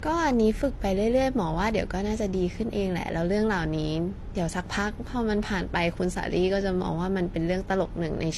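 Throughout the speech, transcoding between lossy codecs is likely: two layers of codec smear overlap, fitting an HE-AAC encode re-encoded as AAC-LC. Nothing reaches above 12.2 kHz, so a spectrogram shows a flat ceiling there, with patchy, blurred detail beneath.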